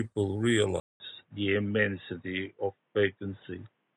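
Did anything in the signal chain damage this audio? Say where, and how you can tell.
Yes. At 0.8 s the speech drops out for 200 ms, then runs to the end at a similar level, with nothing above 3.8 kHz and a new noise floor about 50 dB down. The input was likely switched to a poorer device at the driver stage. A spectrogram shows a gap, then a hard ceiling.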